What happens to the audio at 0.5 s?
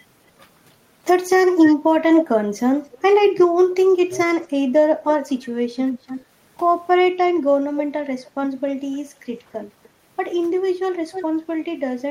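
Nothing goes wrong at 0.5 s; the speech there plays through intact, with no dropout, click or distortion.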